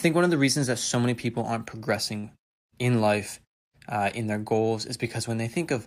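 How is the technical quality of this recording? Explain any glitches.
One glitch stands out in the speech, at 2.19 to 2.25 s: a short concealed packet loss. About 40 ms of audio never arrived, so the receiver filled 39 ms by continuing the preceding sound and then blended back into the real signal. It is heard as a brief smear or wobble. Separately, the background drops to silence during pauses, which is what the muting is meant to do.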